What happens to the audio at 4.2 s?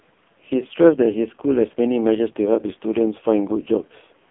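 At 4.2 s the sound is still carrying the AMR narrowband mobile codec that runs through the whole clip. Each 20 ms frame is rebuilt from a vocal-tract filter excited by a handful of pulses, and the damage here is heavy, which fits the codec's lowest 4.75 kbps mode. The result is buzzy, synthetic speech confined to a phone-line band of roughly 200 Hz to 3.5 kHz, with nothing above 3.8 kHz.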